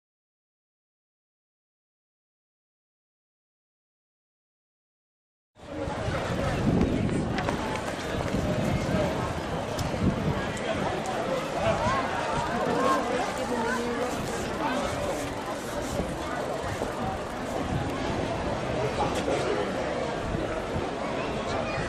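At 6.14 to 6.30 s, and again for longer at 14.03 to 14.56 s, processor overload crackle breaks into the sound: many buffers in a row miss their deadline and are skipped, leaving a gritty tearing. The spacing suggests blocks of roughly 5 ms dropping out. On a waveform these bursts show as dense hard-edged cuts. On a spectrogram they appear as a comb of vertical broadband streaks across both spans.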